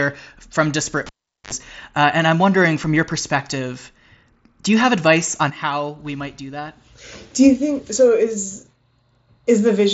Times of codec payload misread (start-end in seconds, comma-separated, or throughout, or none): none